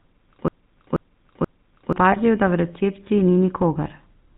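The whole recording has passed through the GSM full-rate codec, running at 13 kbps, which rebuilds the voice from a vocal-tract model driven by sparse pulses and drops everything above 4 kHz. The speech comes out dull and plainly buzzy, with a gravelly edge throughout.

From the very start until 1.93 s a broken-record loop is already under way: a stalled player or stream has likely kept resending the same 0.48 s fragment, so that piece repeats back to back three times before the line resumes with "da v recepciji ni". Whatever should have played during the loop is lost.

Between 2.12 and 2.17 s, GSM bit errors strike: corrupted filter, pitch or gain values reach the decoder across what sounds like a couple of frames, bending the spectrum and producing a brief squawking, gargled burst right by "da v recepciji ni".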